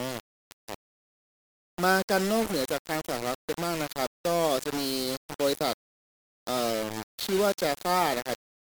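Right through the speech there's gritty, signal-following distortion, likely low bit depth without dither: rounded to about 4 bits, error only around 10 dB down.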